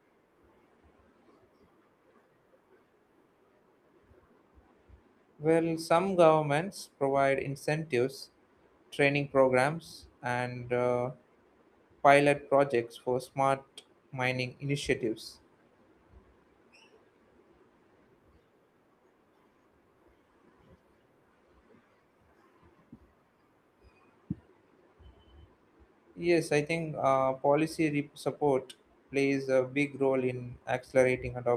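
No technical faults can be heard anywhere in the recording. The speech comes through steadily from its first moment to its last, with nothing in the signal to point to.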